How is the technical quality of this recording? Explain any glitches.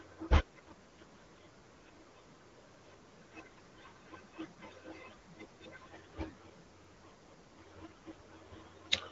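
The recording has one recurring glitch, overlapping chunks, heard twice: from 2.74 to 2.84 s and again from 6.84 to 6.94 s. The audio was processed in 4-second chunks, each starting 100 ms before the previous one ended. At every join that 100 ms of speech plays a second time, giving a brief stutter that recurs 4.1 seconds apart. The speech also passes through an AMR wideband (HD Voice) codec, audible as a band limit with nothing above 7.6 kHz and light codec damage, which fits a 12.65 kbit/s rate.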